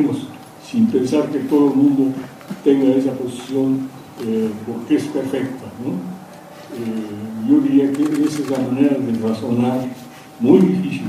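Nothing stood out as a technical fault on listening.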